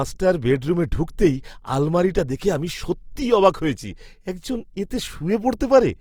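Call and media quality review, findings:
Speech grainy and rough throughout, carrying a noisy, textured fizz, top end still open to about 20.2 kHz. Likely Opus compression in its CELT music mode, starved bands noise-filled instead of dropped, damage plainly audible, fitting roughly 24 kbps.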